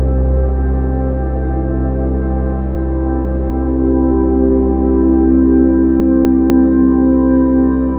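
Around 2.75 s to 3.5 s there's a jumbled stretch: chunks out of order. The audio is cut into 250 ms pieces, and one arrived late and played two slots behind where it belonged, so the sequence is shuffled, with three hard joins where the pieces butt together. The same thing happens again from 6.0 s to 6.5 s, this time with one chunk just a single slot late. Nothing goes missing, but the order is scrambled.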